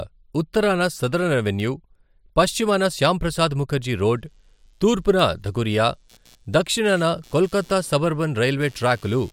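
A single sharp, full-band tick lands at 1.6 s, right after "ఉత్తరాన సదరన్". It is a bit error spike, where one flipped bit jumps a sample by a power of two and straight back. From 4.14 s to the end, following "పశ్చిమాన శ్యామప్రసాద్ ముఖర్జీ", a faint buzz pulsing at around 100 Hz sits roughly 35 dB below the speech. This is computer activity noise, with processor or peripheral load disturbing the audio circuit's shared ground. The same lone tick recurs at 5.19 s, another single-sample bit error spike.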